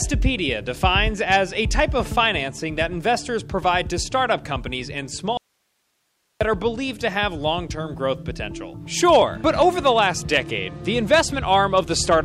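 At 5.37 s the sound cuts out abruptly, and it returns just as suddenly at 6.41 s. This is an audio dropout to a faint residue, lasting about 1.03 s. The gap is not silent. It holds only a low hiss, far below the normal signal level. The wanted signal was likely lost upstream while the path after the break stayed live and kept passing its noise floor. The hard edges mark it as a break, not a pause or fade.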